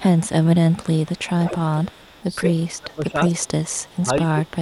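Right from the start there's an echo leak: a faint copy of the speech trailing about 204 ms behind, very low, roughly 30 dB down, from 0.0 to 0.49 s and again from 0.7 to 0.87 s. The likely story is a far end on a loudspeaker whose echo canceller didn't fully scrub what its mic picked up, so some of it came back. It gets much more obvious from 1.03 to 2.57 s, where the delayed copy sits only around 15 dB under the speech. It drops back to a faint trace from 3.68 to 3.99 s.

Overlapping the tail of that louder stretch, from 2.42 to 3.56 s, there's speech suppressed in double talk. The talker's level sags in patches, by as much as about 25 dB at the worst point, across roughly a second in total. It's likely the canceller couldn't tell the talker apart from the echo while both were active, so it ducked everything. The same thing happens again from 3.91 to 4.61 s, this time with dips of about 20 dB, adding up to around half a second.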